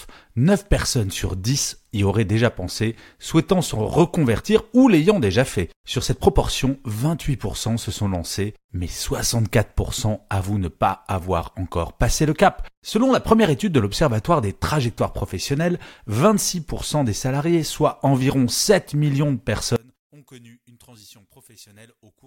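One channel inverted, 19.76 to 22.26 s: the speech falls by about 28 dB to a faint trace, likely from reversed polarity cancelling the centred voice in mono.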